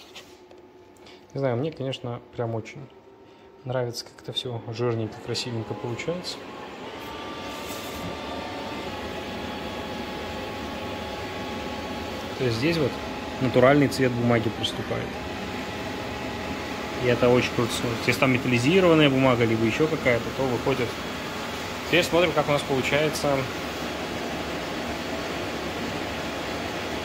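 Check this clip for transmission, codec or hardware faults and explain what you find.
Three brief shifts in speed and pitch, each consistent with a drift correction step. From 2.77 to 4.45 s and from 6.86 to 8.88 s the sound runs about 6.3% fast and rises roughly 106 cents; from 14.57 to 15.16 s it runs 6.3% slow and drops about 113 cents. This is likely clock-matching software changing playback rate in one step to rebalance its buffer, detuning everything by about a semitone.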